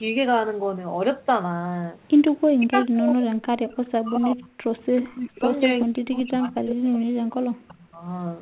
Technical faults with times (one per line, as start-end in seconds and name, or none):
2.58-4.60 speech suppressed in double talk
4.96-5.02 echo leak
5.00-5.47 speech suppressed in double talk
5.85-8.05 speech suppressed in double talk